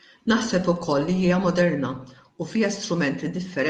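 No technical faults can be heard in this speech, which carries the ordinary coding character of a call codec and a high end that stops at about 12 kHz, as expected from the call path working normally.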